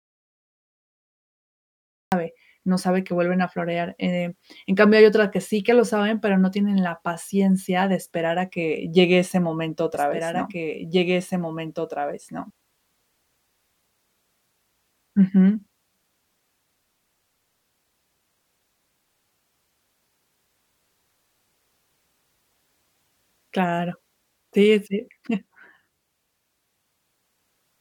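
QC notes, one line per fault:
0.00–2.12 s, audio dropout to silence: the clip opens already in a dead gap of pure silence with no room tone at all, then the speech cuts in abruptly. Unlike a fade or low-level passage, nothing of the signal survives, most likely from a lost input while recording continued.
9.94–12.50 s, doubled audio track: just after "que llegue ese momento", a second full-band copy of the speech runs roughly two seconds behind, about 5 dB quieter, switching on and off abruptly. It has no decay or room colouring, so it is not reverb or an acoustic echo, and is likely a second capture path or overlapping edit.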